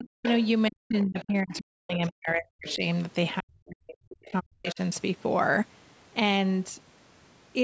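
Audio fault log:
0.0–2.82 s and 3.4–4.79 s, speech suppressed in double talk: the talker's level repeatedly dips and breaks into pieces, falling by as much as around 40 dB, for roughly two seconds in the first span and one in the second. The likely cause is an echo canceller that could not tell the talker from loudspeaker echo while both sides spoke, so it turned everything down. Unlike packet loss, the gaps follow the other voice's activity rather than arriving as brief clicks or robotic fills.
0.25–0.42 s, 1.19–1.53 s, 2.69–2.76 s and 3.87–4.75 s, other side's voice leaking through: a second voice sits underneath the talker, around 15 dB down in the first scrap and around 20 dB down in the others, with the last stretch lasting nearly a second. It is likely far-end audio from the loudspeaker that the echo canceller left in the microphone signal. Room reverberation would smear the talker's own voice, but this is a separate voice that starts and stops independently and falls within the suppression spans.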